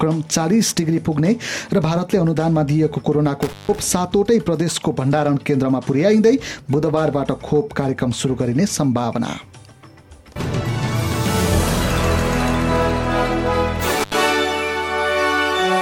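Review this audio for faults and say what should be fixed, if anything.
Intermittent contact: a loose cable or plug briefly opened at 3.42 to 3.79 s and 13.99 to 14.14 s, cutting the sound for about 161 ms and 79 ms with crackle at each break. Reseat or replace the suspect cable and connectors, and secure them with strain relief so movement cannot open the connection.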